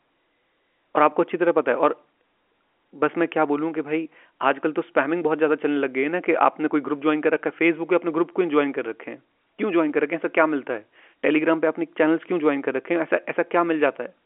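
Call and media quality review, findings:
Nothing stood out on listening to this speech clip, which carries the usual narrow band of G.711 telephone coding, with nothing heard above about 3.8 kHz.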